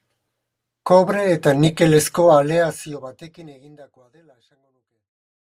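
The speech signal shows no technical faults, and its one level change is a smooth, deliberate fade-out that begins around 2 seconds and tapers gently to silence at the close.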